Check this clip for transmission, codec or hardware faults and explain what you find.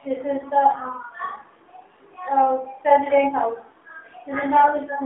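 The clip has one codec fault, present throughout. It is AMR narrowband mobile codec damage. From start to end, the speech sits in a phone-line band of about 150 Hz to 3.6 kHz, with nothing above it. The codec samples at 8 kHz and rebuilds the voice from a vocal-tract model excited by sparse pulses in 20 ms frames. The damage is plainly audible. The voice sounds buzzy and synthetic, which fits a low AMR-NB mode around 7.4 kbps.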